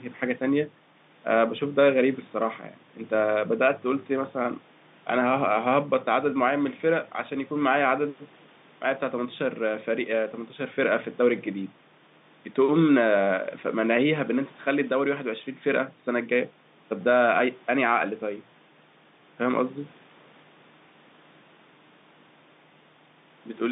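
No technical faults can be heard anywhere in the speech.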